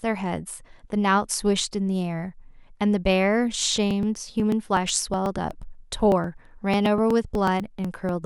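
From 3.91 s to 8.09 s, periodic USB or driver dropouts skip about 2 ms of speech every 0.12 s, roughly forty times. A blocked bus or driver causes these even ticks, heard only under signal, unlike random clicks or irregular buffer underruns.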